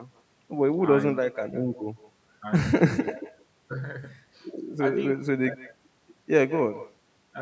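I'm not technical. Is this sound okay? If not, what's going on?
No. There is echo with no canceller throughout. Each word returns about 0.15 seconds later as a quieter, thinner copy, picked up from the other side's loudspeaker.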